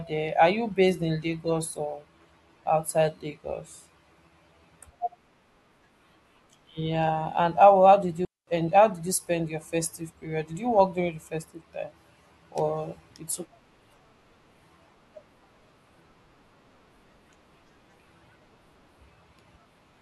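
At 8.25 s, after "and how how did", a digital wireless dropout mutes the speech for 224 ms: a clean near-silent hole with no noise burst, unlike analogue dropouts, before "and how did you".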